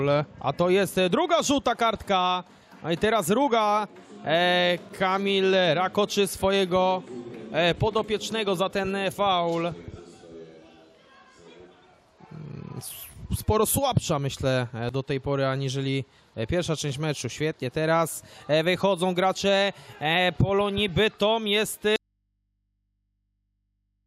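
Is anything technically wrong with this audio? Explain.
Yes. An audio dropout to a faint residue begins at 21.96 s and lasts to the end. The sound cuts out abruptly, leaving only mains hum about 50 dB below the normal level, likely because the source was lost while the input after the break stayed live and open.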